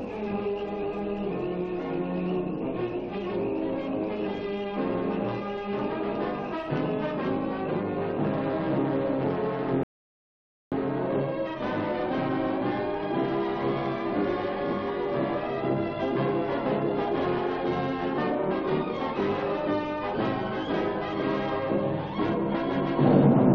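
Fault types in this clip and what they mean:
Rebuffering stall: the player exhausted its downloaded audio and paused for more, so silence fills 9.83 to 10.72 s, then the sound continues from the same point, nothing skipped.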